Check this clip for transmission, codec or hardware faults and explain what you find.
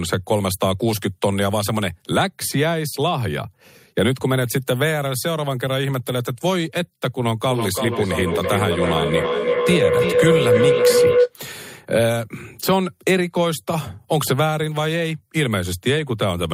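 A feedback howl builds from 7.47 to 11.35 s. Mic-to-speaker loop gain exceeds unity, so repeats swell into a tone around 500 Hz, pulsing roughly every 300 ms, peaking about 4 dB above the speech.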